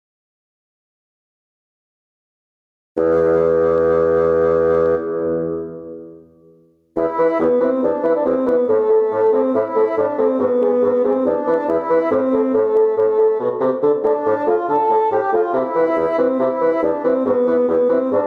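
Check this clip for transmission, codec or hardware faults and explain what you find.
One fault runs through the whole clip: gain pumping. The level is pulled down under each loud sound, swinging by roughly 15 dB, with everything sounding squashed. The likely cause is input gain set far too high, forcing a fast limiter to clamp down repeatedly.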